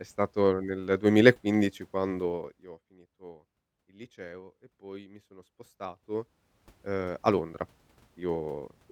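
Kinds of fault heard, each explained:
Zipper noise: A fine ticking, zip-like texture rides on the speech at 2.24–2.8 s, while the level falls by roughly 20 dB. It returns at 5.78–6.88 s as the level climbs back by about the same amount. The gain moves in unsmoothed jumps of about 1 dB or less, around fifty per second. Each jump leaves a tiny click, and at that rate the clicks blur into a continuous zipping sound.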